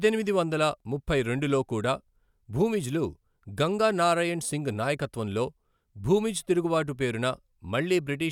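No technical faults can be heard anywhere in this speech recording. There is nothing to timestamp or trace back to a cause.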